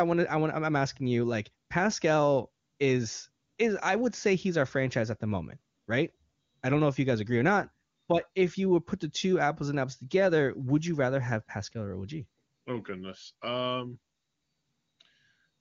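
Listening through this speech, nothing stood out as a technical fault.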